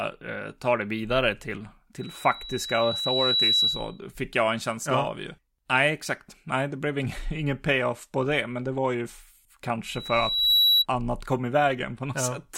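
After "ta det vidare till", from 2.00 to 3.99 s, a 3.9 kHz tone swells over roughly a second and a half to about 5 dB above the speech. It returns from 9.85 to 10.86 s, building faster and reaching about 10 dB above, before "annat kom i". This is loudspeaker feedback squeal: the microphone picks up its own loudspeaker, and loop gain above one at 3.9 kHz makes that frequency grow on its own.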